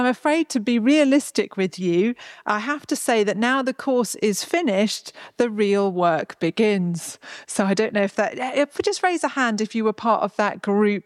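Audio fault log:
No faults detected; the audio shows no audible defects.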